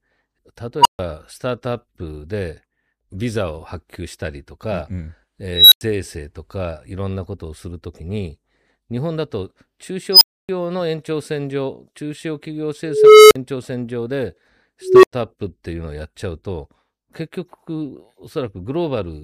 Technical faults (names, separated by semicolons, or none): unstable filter